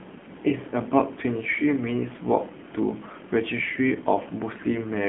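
Speech runs through an AMR narrowband mobile codec for its whole length. Everything above 3.6 kHz is gone, and the usable band sits at roughly 150 Hz to 3.5 kHz, the classic phone-line window. The coding damage is plainly audible as a buzzy, synthetic texture, which fits a low AMR-NB mode of around 7.4 kbps. On a spectrogram, energy stops at a flat ceiling near 3.6 kHz with empty space above and a thinned floor below 150 Hz.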